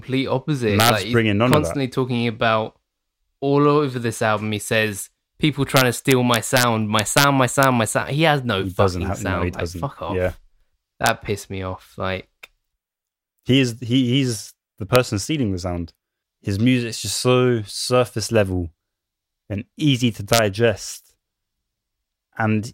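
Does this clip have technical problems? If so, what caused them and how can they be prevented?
Yes: integer overflow, heard as violent cracks at 0.80–0.90, 1.53, 5.77–6.63, 6.99–7.24, 7.63, 11.06–11.09, 14.96 and 20.33–20.39 s. Peaks driven up to about 3 dB past the integer limit wrapped to the opposite sign, flipping across the full range. That makes the cracks far harsher than clipping's flattened tops. To prevent it, use saturating arithmetic or a limiter so that sums and gains clamp at full scale instead of wrapping.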